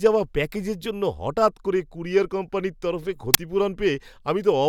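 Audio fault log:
3.34 s, uninitialised buffer: a sudden, loud crack lasting about 10 ms, because one buffer was played before any audio filled it, so stale memory became samples.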